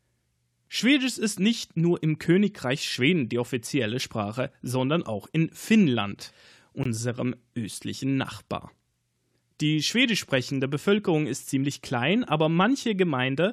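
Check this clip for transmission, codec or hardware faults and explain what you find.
One transmission fault is present: a single brief dropout partway through.

Gap between stream segments, 6.84 to 6.86 s. The timestamps of two consecutive segments fail to meet, leaving about 20 ms unaccounted for, and the player fills that space with digital silence rather than stretching or overlapping the audio. Nothing is removed; the material simply resumes late. It sounds like a short, hard-edged hole: the sound cuts out abruptly and snaps back with no fade at either edge.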